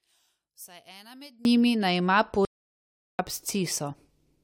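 Speech, with two faults. From 0.0 to 1.45 s one stereo channel is likely polarity-inverted, so the shared centre content cancels in mono: the level falls by about 26 dB and only a faint residue remains until normal sound returns just before "njimi naj ima". After "njimi naj ima", the input likely dropped out and the recorder kept writing silence, producing an audio dropout to silence from 2.45 to 3.19 s, a 740 ms gap of total silence with no room tone.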